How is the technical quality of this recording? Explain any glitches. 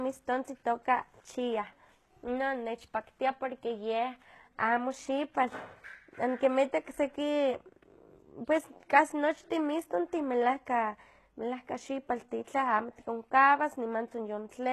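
Quality is noticeably degraded by codec damage running through the whole recording.

HE-AAC compression, throughout: the sound is most likely encoded with HE-AAC at a very low bitrate, consistent with roughly 16 kbps. Only the lower spectrum is coded directly. The treble is synthesised by copying lower bands upward under a coarse envelope, so its harmonics no longer align with the true voice. The s sounds come out gritty and lispy, with a metallic sheen, and nothing reaches above 12.3 kHz.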